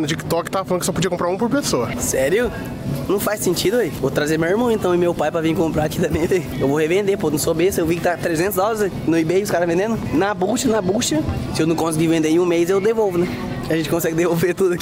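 No technical faults can be heard anywhere in the recording, with no dropouts, clicks, distortion or other disturbances interrupting the signal at any point.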